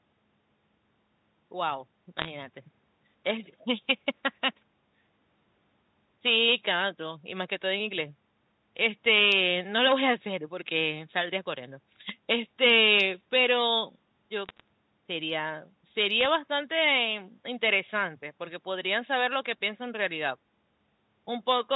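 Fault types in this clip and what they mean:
Bit errors on a digital phone line: single flipped bits in the 8-bit logarithmic samples of this G.711 mu-law speech each corrupt one sample. Hits on the sign or upper bits throw it sharply off, giving short bursts of ticks and crackle at about 2.18–2.30 s, 14.46–14.68 s and 16.21–16.26 s, at well under one percent of bits. Unlike packet loss, nothing drops out or gets concealed. The speech runs on unbroken beneath the clicks.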